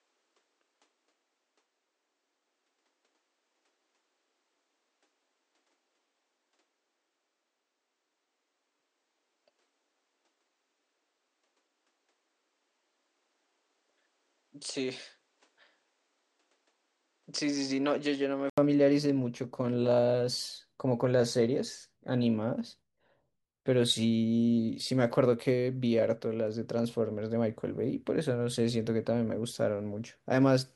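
Speech that sounds duller and slightly quieter until 18.58 s, nothing above 9.4 kHz, then a brief gap and fuller sound: likely an input switched to a poorer device.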